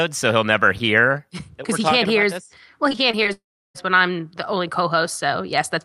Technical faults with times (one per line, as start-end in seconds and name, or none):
2.89-3.27 repeated packet loss (robotic sound)
3.33-3.86 long network dropout